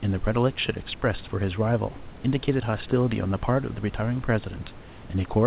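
Nothing stood out on listening to this speech clip, which comes through a G.711 mu-law call path with no content above 4 kHz and carries room noise about 24 dB below the speech.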